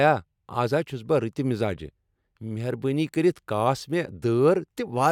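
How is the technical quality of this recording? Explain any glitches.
No glitches can be heard in this recording. Nothing at any point in the speech stands out as a technical problem.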